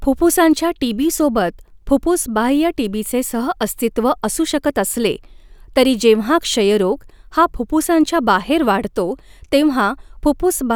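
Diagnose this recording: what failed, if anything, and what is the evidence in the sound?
Nothing failed; no fault can be heard here.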